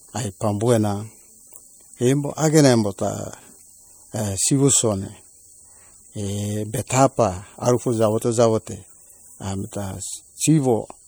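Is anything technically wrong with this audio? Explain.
Yes. The whole speech clip carries plainly audible MP3 compression damage, present from start to finish rather than at any single moment. The weaker high-frequency detail flickers in and out from frame to frame, giving that watery, swirly texture with metallic chirps on the s sounds and softened attacks. The amount of damage fits a low bitrate of around 64 kbps, which is the likely cause: the encoder simply ran short of bits.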